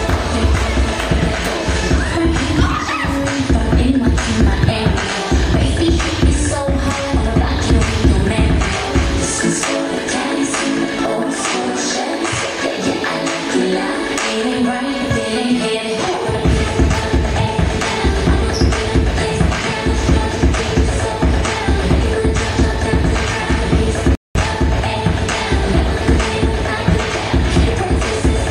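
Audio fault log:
24.15 to 24.35 s, rebuffering stall: playback runs dry of downloaded audio and halts for about 200 ms, then carries on from the exact point where it stopped, so nothing is skipped but the timeline is stretched by that gap. On the waveform this is a flat, empty stretch cutting straight through the signal. A spectrogram shows a clean vertical band of blank energy across every frequency, with the content on either side joining up seamlessly once the gap is removed.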